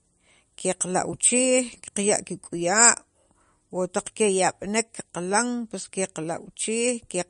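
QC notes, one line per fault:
throughout: MP3 compression, likely low-bitrate, around 43 kbps by ear; nothing above 10.5 kHz, watery swirl; spectrogram shows a hard ceiling and flickering holes.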